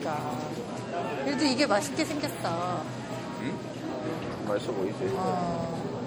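Throughout, the sound has a swirly, hollow, smeared quality, with blurred attacks and nothing above about 20.9 kHz. This is generation loss, likely from MP3 coding repeated around four times at roughly 64 kbit/s, each pass adding fresh quantisation noise and spectral holes.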